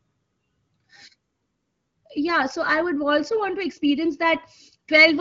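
No technical faults are audible.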